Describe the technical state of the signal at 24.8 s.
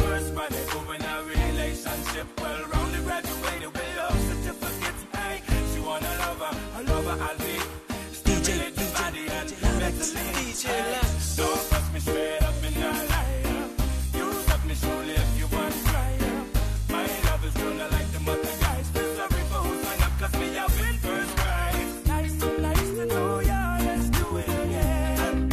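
Nothing at 24.8 s points to a technical fault; the signal is intact at that moment.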